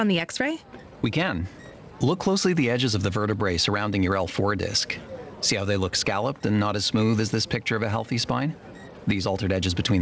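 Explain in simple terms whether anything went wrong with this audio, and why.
Something did go wrong: gain pumping runs through the whole clip, from start to finish. Each time a loud sound arrives, the level of everything drops. The likely cause is an input gain set far too high, with a fast limiter or compressor repeatedly pulling it down. Loud and soft moments end up squeezed closer together. The missing top end above 8 kHz comes from the call codec and is expected.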